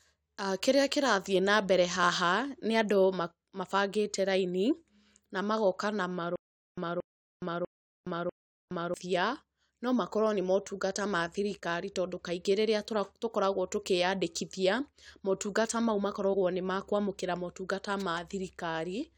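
From 6.36 to 8.94 s, right after "na magoka na", there's a stutter with silent gaps. A 228 ms burst repeats four times, every 646 ms, with 418 ms of dead silence between. It's likely a stalled stream replaying its last fragment.

At 16.33 s, between "tũkoragwo tũkĩyandĩkithia motungata mau" and "nĩ makũamũkĩra", compressed frames are skipped. The speech jumps ahead by roughly two 23.2 ms frames, about 50 ms lost.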